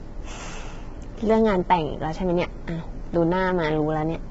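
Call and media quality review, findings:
Rough, grainy speech throughout, noise between harmonics, nothing above 7.7 kHz. Likely low-delay AAC compression (AAC-ELD); short frames resolve pitch poorly, fitting heavy damage near 16 kbps.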